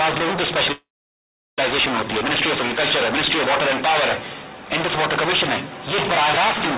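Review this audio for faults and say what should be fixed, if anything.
A call audio freeze runs from 0.72 to 1.59 s. The last sound trails into about 0.74 s of silence, then the audio resumes exactly where it stopped. Unlike a dropout, nothing is missing. This is likely from delayed packets draining the jitter buffer. A steadier network route or a larger, adaptive jitter buffer would prevent it.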